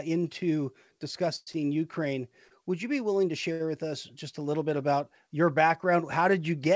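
Speech over a call link whose band stops at 8 kHz, consistent with a wideband codec such as G.722. From 1.36 to 1.49 s there is a call audio freeze: the last sound is held as a fading buzz for about 0.11 s, including roughly 20 ms of silence, likely from delayed packets draining the jitter buffer, before the audio resumes without loss. Short stalls from late packets follow at 1.53 to 1.56 s, 2.48 to 2.52 s just before "would you be willing", and 3.52 to 3.62 s just after "you be willing to". In each, a sound is stretched by 16, 21 and 74 ms respectively while the receiver waits, adding delay but dropping nothing.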